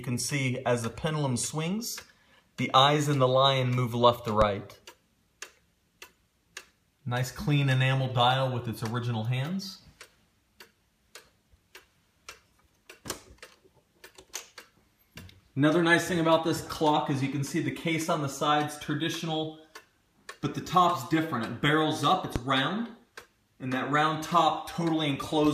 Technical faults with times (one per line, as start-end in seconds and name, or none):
4.42-4.45 loud pop
22.36-22.40 loud pop